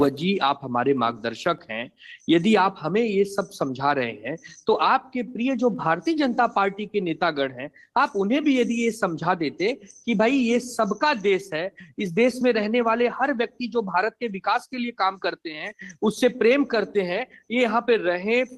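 No faults present; the audio comes through the call path with the slightly band-limited, coded character that fits a 24 kbps Opus link topping out near 12 kHz.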